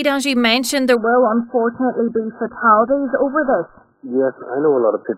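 From 0.95 s to the end, the adaptive stream drops to a lower bitrate. Everything above about 1.7 kHz vanishes, leaving a sudden, muffled, smeared sound with no gap.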